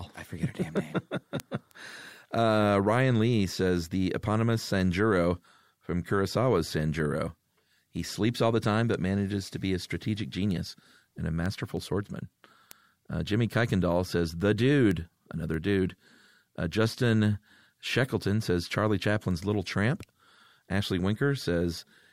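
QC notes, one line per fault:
0.14–21.82 s, word clock ticks: sharp, uneven ticks recur across the speech at a steady rate of about one every third of a second, around seventy in all. The receiving device is running on its own clock rather than locked to the sender's, so each time the clocks slip, a single sample is dropped or repeated. The regular spacing and the absence of any gap or muting set this apart from random clicks or buffer dropouts, and point to a clock mismatch of something like 70 ppm.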